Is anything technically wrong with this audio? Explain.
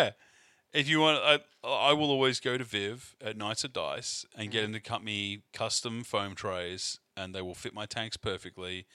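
No, no technical faults here.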